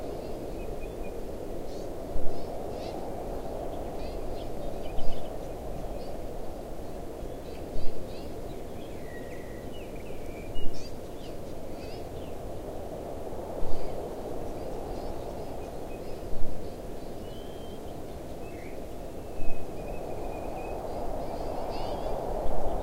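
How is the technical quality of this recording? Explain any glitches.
The recording has four compressed-frame dropouts, at 3.99, 7.44, 10.06 and 15.10 s. These are compressed frames skipped: the decoder lost whole blocks of roughly 24 ms each, so the sound leaps ahead by around 0.2 to 0.4 s. Each join is heard as a brief jump in the audio. On a waveform or spectrogram, this shows as an abrupt discontinuity in texture.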